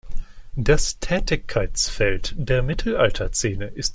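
Nothing stood out on listening to this speech recording.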